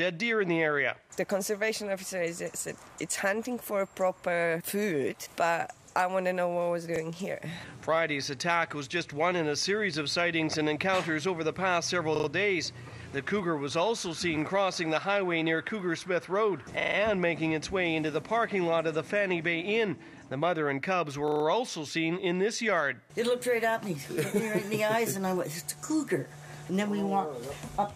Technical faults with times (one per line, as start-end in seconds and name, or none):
6.96-7.00 repeated buffer
12.16-12.28 repeated buffer
16.80-16.96 repeated buffer
21.28-21.44 repeated buffer